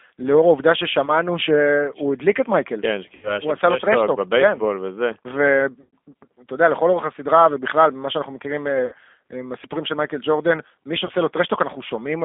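Throughout the speech there is a thin, slightly rough and synthetic quality, with everything held roughly between 250 Hz and 3.5 kHz. This points to G.729 codec damage, which fits 8 kbit/s G.729A. The codec rebuilds each voice frame from a filter and a few pulses, and the loss of detail is plainly audible.

At 1.06–1.10, 3.15–3.39, 5.81–5.91, 8.86–8.95 and 11.05–11.11 s, the speech briefly smears into a stretched sound that fades. These are VoIP packet loss concealed by the speech codec, covering about 20, 80, 120, 60 and 40 ms of missing audio. The decoder stretches its last pitch and filter while lowering the gain, so the voice stays weak for a while after packets return.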